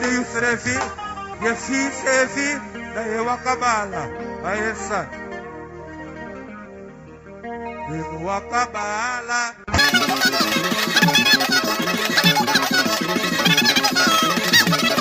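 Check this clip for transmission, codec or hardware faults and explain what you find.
One fault is present: a wrong sample rate from 9.78 s to the end. The samples run about 2.76 times too fast with no conversion, consistent with 16 kHz material clocked out at 44.1 kHz. Speed and pitch rise together, about 17.6 semitones, so the sound turns shrill and rushed.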